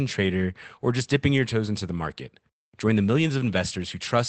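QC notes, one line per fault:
No faults heard anywhere in this speech recording.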